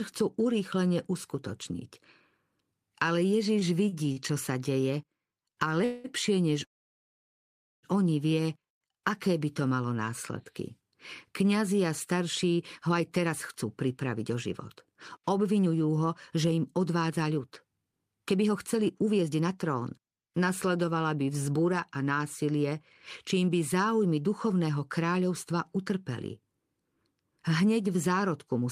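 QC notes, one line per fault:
3.59–4.19 s, repeated stalls (stutter): the speech catches three times in just over half a second, with the last bit of sound held and stretched at each catch before it moves on. Altogether about 91 ms is filled this way, the longest hold 45 ms, about 15% of that stretch. Packets were arriving more slowly than they played, so the jitter buffer kept emptying and the receiver bridged each gap. Nothing is lost, so the speech drags and hiccups rather than skipping.
5.84–6.07 s and 6.64–7.86 s, call audio freeze: in the first, the sound hangs as a continued buzz for about 0.2 s with no drop to silence, then resumes. In the second, a brief held tone gives way to near silence lasting about 1.16 s of its 1.19 s. Each is likely packets held up in transit until the jitter buffer ran dry, so the speech picks up where it stopped, delayed but complete. A single long wait with no repeated catches is what separates these from the stutter.
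12.54–20.00 s, 21.22–25.04 s and 27.86–28.62 s, jitter buffer speed-up: the speech runs hurried but keeps its normal pitch. It plays at 112% in the first span, with roughly a second trimmed, then at 107% with about 0.3 s trimmed, and finally at 106% with only a sliver trimmed. The buffer held more audio than it aimed for, so the receiver removed many tiny pitch-period slices to draw the delay back down.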